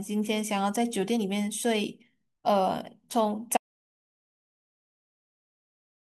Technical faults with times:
3.57-6.09 audio dropout to silence

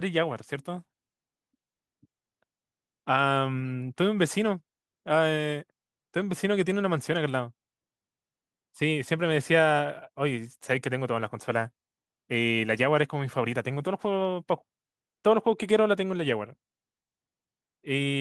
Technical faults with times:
none

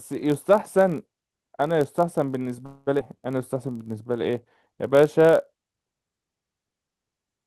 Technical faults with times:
0.00-7.46 block size mismatch (padded)
2.66-2.89 call audio freeze
2.99-3.01 skip ahead
3.54-5.03 jitter buffer slow-down

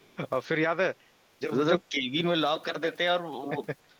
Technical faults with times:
0.00-0.16 echo leak
1.76-2.13 speech suppressed in double talk

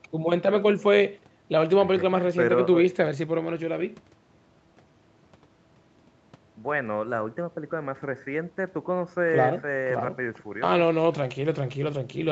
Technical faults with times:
none

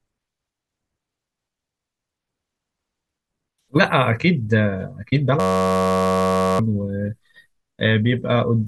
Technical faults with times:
5.40-6.59 system hang loop

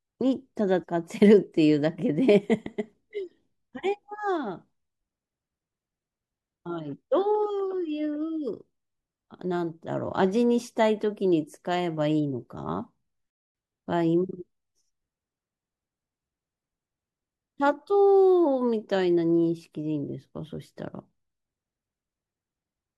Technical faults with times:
0.82 compressed frames skipped
2.65 compressed frames skipped
13.30-13.55 playback stall

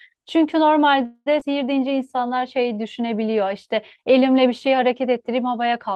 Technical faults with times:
1.05-1.28 call audio freeze
1.40-1.43 skip ahead
1.80-2.81 jitter buffer slow-down

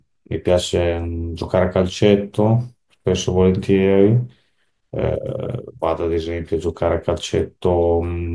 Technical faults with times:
none

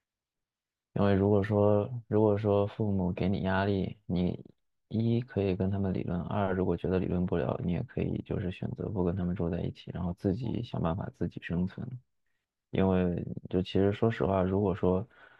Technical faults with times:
none

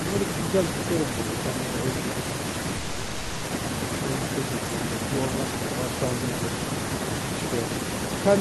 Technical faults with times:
0.00-8.41 echo with no canceller
2.77-3.45 call audio freeze

